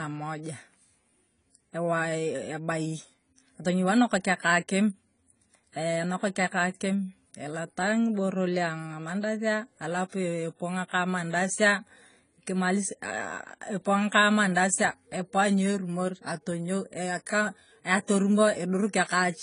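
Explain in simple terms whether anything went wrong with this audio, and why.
Yes. From start to finish the speech sounds dull and smeared, with a watery, fizzy edge on hissy sounds and nothing above about 10 kHz. The likely cause is heavy AAC compression: the encoder discarded the upper frequencies and detail it judged least noticeable.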